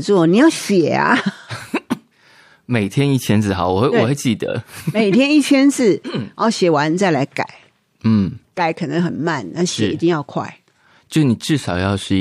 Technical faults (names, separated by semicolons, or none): none